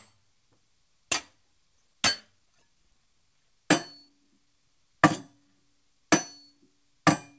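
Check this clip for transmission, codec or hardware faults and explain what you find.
Two transmission faults are audible; the G.722-style band limit, with nothing above 8 kHz, is the normal call path.

A skip ahead occurs at 1.78–1.80 s. Roughly a second of audio was discarded while later packets were already queued, and playback jumps straight to them with no fill, so the sound before and after is spliced almost directly.

A jitter buffer speed-up runs from 1.87 to 5.48 s. With the buffer holding excess audio, the receiver repeatedly trimmed pitch-period-length pieces, about half a second in total, so the sound plays roughly 12% faster at unchanged pitch and feels rushed.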